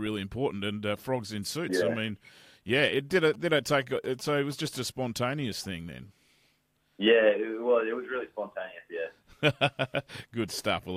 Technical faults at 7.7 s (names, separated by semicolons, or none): none